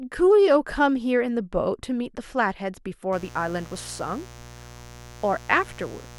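Mains buzz enters at 3.13 s and continues to the end of the speech. Sharp switching spikes, likely from a dimmer, rectifier or poor shielding, arrive twice per 60 Hz cycle, stacking harmonics into the kilohertz range. The result is a steady, raspy buzz about 20 dB below the speech.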